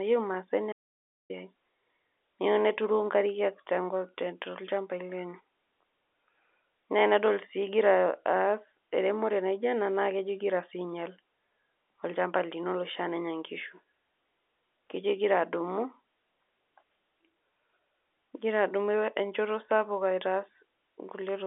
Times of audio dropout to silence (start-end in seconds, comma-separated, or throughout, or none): 0.72-1.30